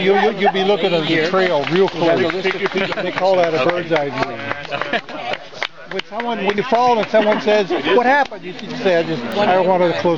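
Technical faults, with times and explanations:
9.32 s, bit error spike: a single sample jumps to about -11 dBFS and falls straight back, as one flipped bit shifts its value by a power of two. It gives one sharp broadband tick, seen as a one-sample needle in the waveform and a thin vertical line across the spectrogram.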